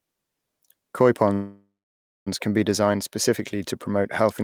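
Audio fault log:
1.33–2.28 s, call audio freeze: packets were likely held up in transit and the jitter buffer ran dry, so the receiver stretched the last sound into a fading buzz that falls silent for 0.6 s. The audio then resumes where it stopped, 0.93 s late, with nothing lost.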